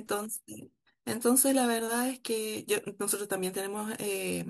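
At 1.79 s the stream likely skipped a fraction of a millisecond of samples, a case of dropped samples, so the waveform jumps abruptly and a single sharp click cuts through the speech.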